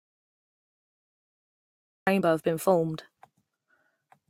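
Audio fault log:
0.00–2.07 s, audio dropout to silence: clip opens silent, no room tone, speech cuts in mid-flow; likely lost input. Waveform flat, spectrogram blank.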